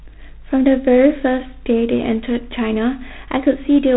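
Throughout, a harsh, rasping hiss rises and falls with the speech, with nothing above 4 kHz. This is G.726 ADPCM coding with too few bits per sample, which fits 24 kbit/s.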